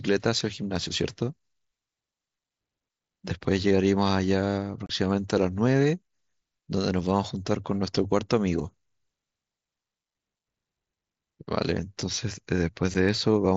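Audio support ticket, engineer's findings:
Unconcealed Bluetooth headset packet loss, headset-to-phone radio link. Voice frames missed in transit and filled with silence, with no concealment, so the speech has holes with hard edges. 4.86–4.90 s: 30 ms gap, consistent with four consecutive 7.5 ms mSBC frames lost; audible abrupt cut and restart. 12.94 s: single 7.5 ms dropout, about one frame's worth; short break. mSBC wideband path audible as light grain on louder syllables.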